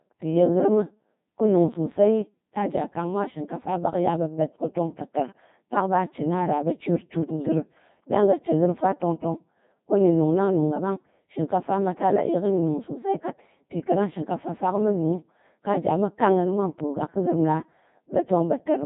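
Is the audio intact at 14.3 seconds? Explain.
No. At 14.3 s, as throughout, the Codec 2 vocoder rebuilds speech from pitch and envelope as sine waves, sounding robotic and buzzy with nothing above 3.8 kHz, which fits a 2.4 kbit/s mode.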